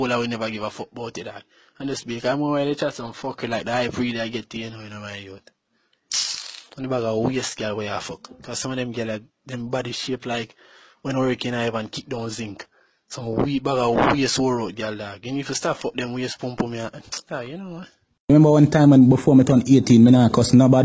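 No technical fault can be heard anywhere in the audio. Nothing in the sound points to a problem with how it was captured, processed or played back.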